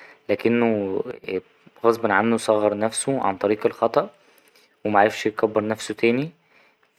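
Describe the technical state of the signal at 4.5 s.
At 4.5 s the speech signal is intact, with no dropout, clipping, glitch or other fault at that moment.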